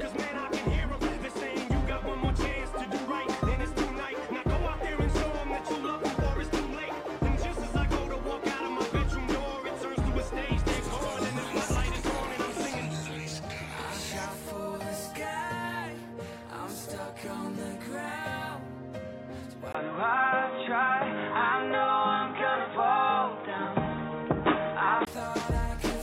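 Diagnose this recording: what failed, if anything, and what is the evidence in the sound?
Likely an input switched to a poorer device at the driver: a 20 ms gap at 19.73 s, then a spectrogram empty above 3.8 kHz until 25.07 s, with a new noise floor.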